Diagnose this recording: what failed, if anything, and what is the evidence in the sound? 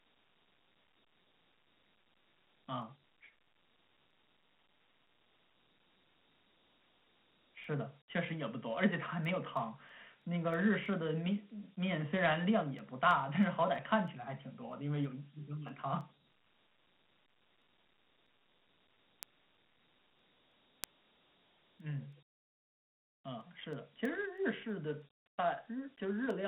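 Dialogic VOX ADPCM runs throughout the speech, a codec-stage fault. The band sits between 150 Hz and 3.4 kHz with nothing above 3.9 kHz, which fits 4-bit ADPCM at 8,000 samples a second. Coarse step-size adaptation leaves a plainly audible gritty hiss trailing the speech.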